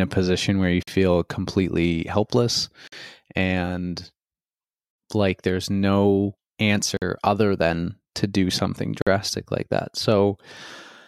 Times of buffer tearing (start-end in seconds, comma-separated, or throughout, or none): none